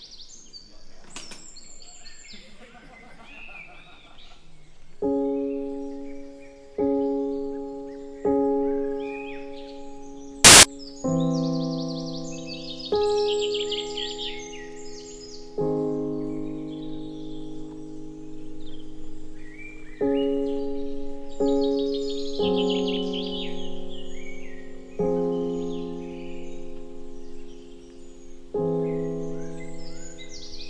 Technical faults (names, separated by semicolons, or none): file tags played as audio